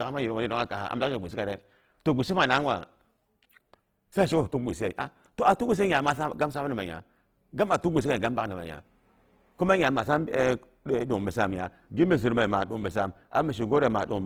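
Throughout, the speech sounds rough, grainy and noisy, likely Opus compression at a low rate around 16 kbps filling starved bands with noise.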